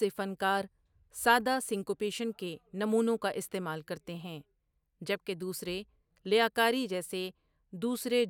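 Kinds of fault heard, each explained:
No technical faults can be heard in this recording.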